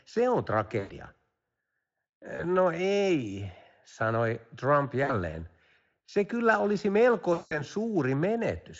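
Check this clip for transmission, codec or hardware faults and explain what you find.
One fault recurs: VoIP packet loss concealed by the speech codec, at 0.79–0.92 s, 2.35–2.47 s, 5.03–5.11 s and 7.33–7.61 s. The Speex coding itself leaves at most a faint trace. When packets went missing for about 100, 40, 60 and 180 ms, the decoder repeated its last pitch and filter with falling gain. The result is a buzzy, smeared tone that fades out. On a spectrogram it appears as flat, repeated harmonics, and on the waveform as a decaying, periodic stretch.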